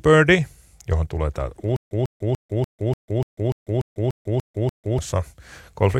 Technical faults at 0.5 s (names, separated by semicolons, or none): none